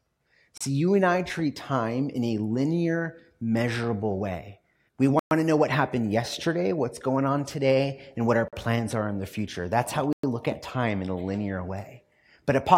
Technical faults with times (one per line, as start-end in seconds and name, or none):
0.58-0.61 Bluetooth stall
5.19-5.31 Bluetooth stall
8.48-8.53 Bluetooth stall
10.13-10.24 Bluetooth stall